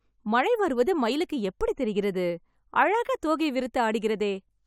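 Nothing in the recording trips any alarm, with no dropouts, clicks, glitches or distortion turning up anywhere along the way.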